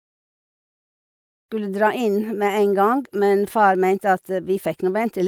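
No technical faults are present.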